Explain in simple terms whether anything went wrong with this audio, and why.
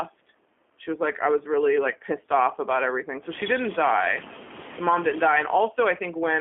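Something did go wrong, and it lasts the whole clip. The speech has been through the G.729 codec, a phone-call format that squeezes a voice into very little data. It keeps only a rough model of the mouth and the pitch, plus a few pulses, and rebuilds the sound from those. The damage is plain to hear. The voice sounds rough and slightly synthetic. It is also thin, because nothing below about 250 Hz or above 3.4 kHz gets through.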